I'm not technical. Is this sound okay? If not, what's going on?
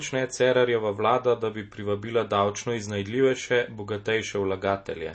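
No. MP3 compression runs throughout: the encoder likely ran short of space, so it cut everything above 8.3 kHz and dropped faint detail, leaving the speech dull and watery.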